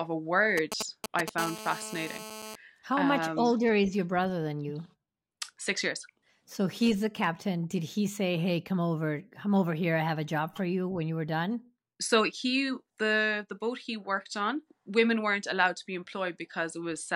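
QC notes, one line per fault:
0.58 to 1.30 s: GSM signalling bursts. A 2G handset close by is sending brief groups of radio bursts at about 217 Hz, and the audio circuitry rectifies them into the speech path, giving a galloping dit-dit-dit of short raspy buzzes, roughly 5 dB below the speech.
1.38 to 2.56 s: GSM phone buzz. A nearby 2G phone is now transmitting continuously as in a call, its 217 Hz burst rate rectified by the audio electronics into a steady, hard buzz rich in harmonics, about 12 dB below the speech and unrelated to it.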